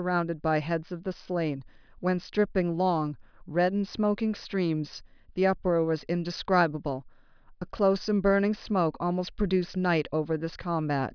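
No technical faults are audible anywhere in this speech recording.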